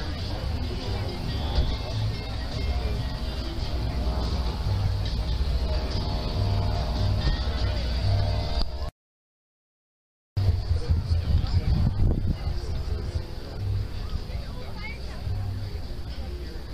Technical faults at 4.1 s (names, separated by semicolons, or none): clock drift buffer slips